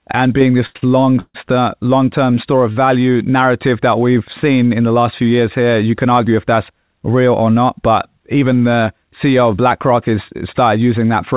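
This speech clip has two short stalls from late packets right after "and being". Packets arrived behind schedule and the jitter buffer ran dry, so the receiver held the last sound until they came. The first hold runs from 0.66 to 0.77 s, filling about 90 ms, and the second follows directly to 0.84 s, adding another 49 ms. The syllable stretches with a slight buzzy smear, then resumes from the same point with nothing lost, only delayed. Shortly after comes a call audio freeze from 1.20 to 1.36 s, likely caused by packets being held up in transit long enough to empty the buffer again. About 144 ms is filled in: the last sound carries on as a fading buzz that dies into roughly 60 ms of silence before the audio picks up where it stopped, so the stream gains a gap rather than losing any sound. Throughout, nothing reaches above 4 kHz, which fits a narrowband call codec such as G.711 at 64 kbps.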